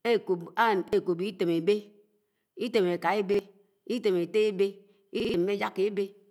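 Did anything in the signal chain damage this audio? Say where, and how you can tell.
Yes, a repeated buffer at the driver stage. Audio arrived late, so a 46 ms chunk replayed once at 0.88 s and 3.34 s, and three extra times at 5.20–5.34 s.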